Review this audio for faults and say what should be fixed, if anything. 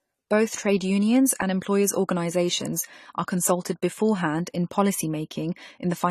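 The whole clip, start to finish, has the dull, smeared quality of AAC compression, most likely AAC-LC squeezed to a low bitrate, with damage you can plainly hear. Nothing gets through above 14 kHz, so the top end is missing, and with that few bits per frame the encoder is leaving gaps in the spectrum and papering over bands, which gives sibilants and held sounds a fizzy, warbly edge. The texture fits something around 32 kbps. To prevent it, keep the master lossless and only encode at a much higher bitrate for delivery.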